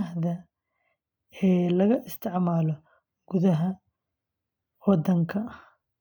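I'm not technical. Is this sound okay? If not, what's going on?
Yes, nothing in this recording stood out as a problem when I listened to it.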